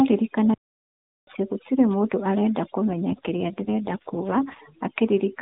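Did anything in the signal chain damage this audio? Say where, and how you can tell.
Yes. Overdone noise removal runs through the whole clip, at the call-processing stage. The background between phrases sinks to near silence, dotted with twinkling specks. A suppressor set too hard is cutting individual frequency bands whenever they sit close to its noise estimate. Quiet parts of the voice fall under that line and get removed with the noise. That leaves isolated bins popping in and out.

A playback stall cuts the sound from 0.54 s to 1.27 s, a gap of about 0.73 s. The speech stops mid-flow and goes dead silent. It resumes with "gũtirĩ mũndu arenda". This points to the playback stage. The likely cause is that the player's buffer ran dry, or its thread was blocked, and output held silence until data arrived again.

An AMR rate drop starts after "gũtirĩ mũndu arenda" and lasts from 2.88 s to 4.61 s. 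The bandwidth does not change and there is no gap. The speech turns rougher, buzzier and more synthetic, then recovers. That fits the network pushing the AMR-NB codec down from its 12.2 kbps mode to the 4.75 kbps floor, with the freed bits spent on error protection. Fewer pulses per subframe mean a cruder excitation, and that is the buzz you hear.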